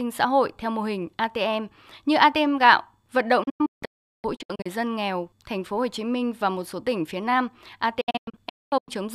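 From 3.43 to 4.66 s, between "gạo vận" and "dân nghèo thành phố", the speech breaks into short silent holes totalling about 0.83 s, the longest 0.38 s, each cut with an 8 ms fade. From 8.01 to 8.95 s, about 0.54 s drops out the same way, the longest hole 0.22 s. This is digital broadcast dropout: the receiver muted whenever frames failed, and the missing audio is lost.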